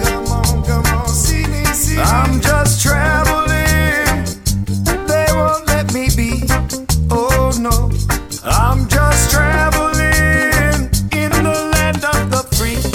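No technical faults can be heard anywhere in the recording.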